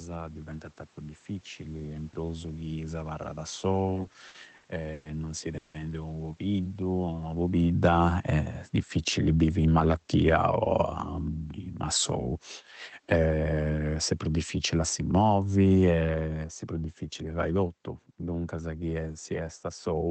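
Right after "in prusu chi s'abarrada", from 3.95 to 5.07 s, the audio breaks into repeated stalls (stutter). Packets arrived late, the jitter buffer kept running dry, and six gaps totalling 300 ms (longest 120 ms, 27% of that span) were filled by stretching the last sound. On a spectrogram these appear as short smeared, frozen-looking bands; the waveform shows repeated sustained segments in place of normal syllabic movement.

From 5.57 to 5.76 s a single call audio freeze holds the sound for 170 ms, likely because packets were held up in transit. It is heard as a brief buzzy continuation that does not drop to silence. The spectrogram shows horizontal streaks where the last frame was repeated.

From 6.48 to 10.50 s the automatic gain falls by about 6 dB. Voice and room noise sink together, and the waveform envelope tapers steadily. Inside that stretch, from 7.94 to 8.35 s, automatic gain rises about 4 dB as a quick swell. 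The same pattern returns later, with a gain fall from 13.0 s to the end and a rise of about 4 dB from 15.27 to 15.67 s, visible as a lifted noise floor between words.

Jitter buffer speed-up runs from 8.83 to 9.81 s at 113% and from 16.15 to 16.68 s at 112%. The receiver trimmed pitch-period slices, roughly 150 ms and 70 ms respectively, so the sound hurries at unchanged pitch. The spectrogram shows compressed timing with harmonics that keep their spacing.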